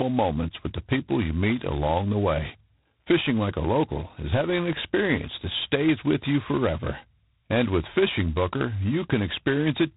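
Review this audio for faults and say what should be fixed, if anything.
G.726 ADPCM throughout: prediction errors coded in very few bits, which fits 16 kbit/s, give a rasping hiss that follows speech level, unlike steady noise. Prevent it by carrying the call at 32 kbit/s or over a wideband codec.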